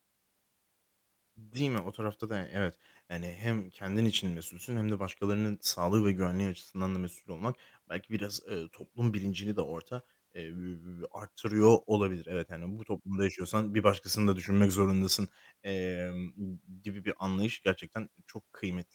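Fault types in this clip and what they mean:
No faults can be heard.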